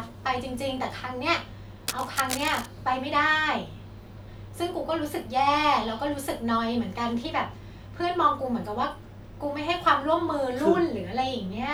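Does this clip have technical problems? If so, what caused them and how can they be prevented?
Yes. From 1.87 to 2.66 s a dense, uneven scratching and rustling sits over the speech, about 10 dB below it. This is cable scratch noise, likely from a worn cable or connector being moved, its contact resistance jumping rapidly and injecting noise bursts. Replacing worn cables and securing connectors so they cannot shift during recording prevents it.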